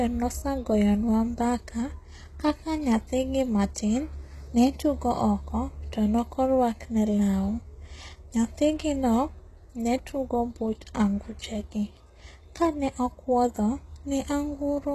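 Speech, most likely squeezed through HE-AAC compression at a bitrate that fits about 16 kbps, for the whole clip. The treble is copied up from lower bands and not truly coded, so sibilants sound gritty and mismatched, with nothing above 12.3 kHz.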